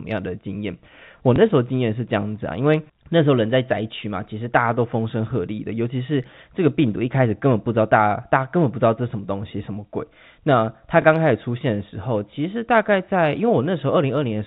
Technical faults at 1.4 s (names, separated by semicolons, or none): packet loss with last packet repeated